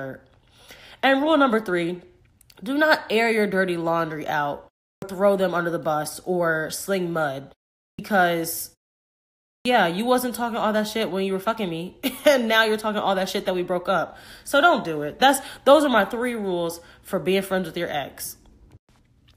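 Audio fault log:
4.93 s, 7.90 s, 9.56 s: clipped start after a pause, each following a short silence, once after "your dirty laundry out", once after "bus or sling mud", once before "you wasn't talking all". The output device dozes during silence and wakes late, so roughly 90 ms of the returning speech is swallowed and words begin abruptly, missing their first sounds.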